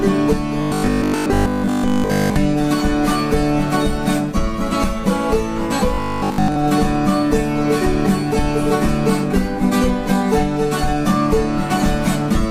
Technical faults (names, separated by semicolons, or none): robotic sound from repeated short buffers